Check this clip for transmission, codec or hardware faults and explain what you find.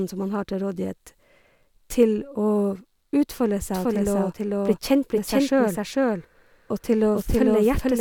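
One fault is present: a doubled audio track from 3.73 s to the end. The speech is mixed in a second time, about half a second late and roughly as loud, likely from a slower second capture path. The waveform shows overlapping duplicate patterns, and the spectrogram shows a shifted full-band copy without reverberant smearing.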